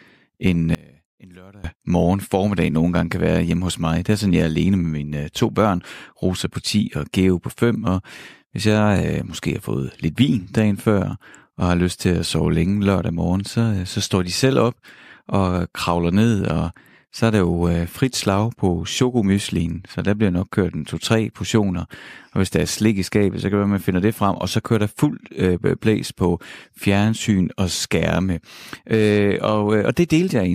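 Speech, with a sudden collapse from 0.75 to 1.64 s. The level drops about 26 dB. Likely cause: one channel inverted, cancelling centred sound.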